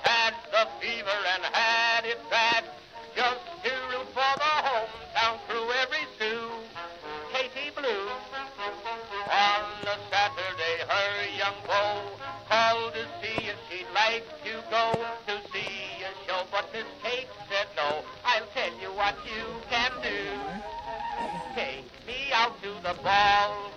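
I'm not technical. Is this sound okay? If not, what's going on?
Yes, nothing stood out as wrong when listening to this sound.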